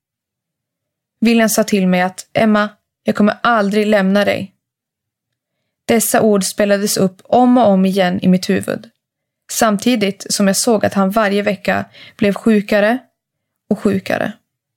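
No technical faults can be heard anywhere in this speech recording. There is nothing here that needs a timestamp or a fix.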